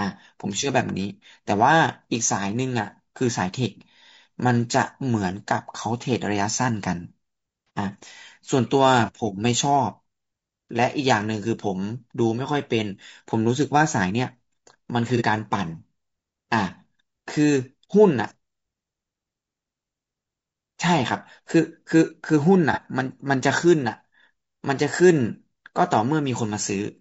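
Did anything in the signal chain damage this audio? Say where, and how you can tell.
Yes. Low-delay AAC compression, throughout: the speech has a rough, grainy texture across the whole clip, with noise filling the gaps between pitch harmonics and a thin, synthetic-sounding top band. This is likely codec damage at the encoding stage. A low-delay AAC variant such as AAC-ELD codes about 500 frequency lines a frame with a low-delay window, and at a modest bitrate (this sounds like around 32 kbps) the encoder runs short of bits and fills detail with noise.

AAC frame loss with concealment, at 7.67 to 7.70 s, 15.17 to 15.22 s and 22.73 to 22.79 s: each is a brief smeared, noisy patch of about 30 ms, which fits a single missing frame. The damage comes from the network or transport stage. When a frame fails to arrive, the decoder rebuilds the gap from the last good spectrum with randomised phase. 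That keeps the level steady but blurs the fine structure.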